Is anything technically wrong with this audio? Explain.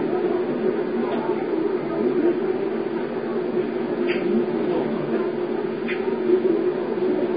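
Yes. Throughout, likely Vorbis compression at a very low bitrate around 16 kbps: coarsely quantised treble turns into grainy hiss, attacks blur, and nothing remains above 4.9 kHz.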